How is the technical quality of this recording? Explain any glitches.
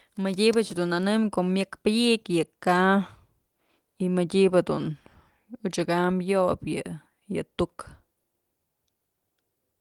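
Nothing stood out on listening: the speech carries no audible glitches, dropouts or distortions that would count against its technical quality.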